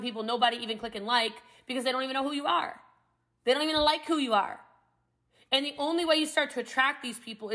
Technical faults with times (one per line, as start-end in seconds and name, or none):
none